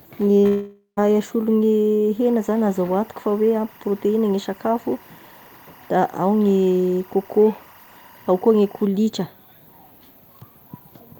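At 0.41 to 0.45 s the speech briefly smears, a short concealed packet loss. A few hundredths of a second of audio arrived too late, and the decoder bridged the gap by extending the preceding sound. On a spectrogram the harmonics stretch flat across that sliver instead of moving naturally.

From 0.47 to 0.99 s the sound freezes into a fading buzz lasting about half a second, the last roughly 120 ms of it silence, before speech resumes with a piece missing. That points to a likely long network dropout, where the receiver continued the last sound until it gave up. The waveform shows a decaying, repetitive stretch ending in a flat gap, and the spectrogram shows smeared harmonics thinning to blank.

From 2.2 to 8.85 s a steady chirping warble sits behind the speech. This is timecode bleed: linear timecode running at 24 frames per second has leaked into the audio path, about 30 dB below the speech. 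Its square wave flips between tones near 1 and 2 kHz, visible on a spectrogram as persistent narrow bands at those frequencies running unbroken through the speech.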